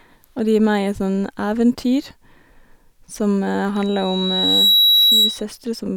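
From 3.75 to 5.44 s, loudspeaker feedback squeal rises over the speech. A microphone is hearing its own loudspeaker, and the loop gain tops one at 3.9 kHz. That tone swells over about a second into a piercing whistle, ending a few decibels above the speech.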